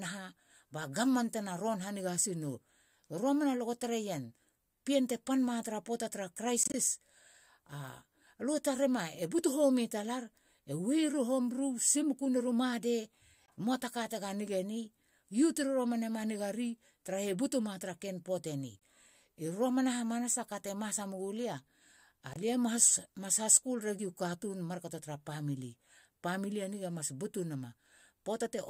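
Speech with corrupt frames muted: damaged compressed frames were rejected by the decoder and replaced with silence, leaving abrupt dropouts at 6.63–6.76 s, 13.46–13.49 s, 18.79–18.84 s and 22.34–22.37 s, each a whole-frame gap with timing intact.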